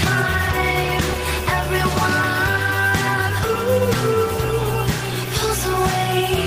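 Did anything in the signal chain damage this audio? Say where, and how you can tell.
No, nothing in the signal chain damaged this audio.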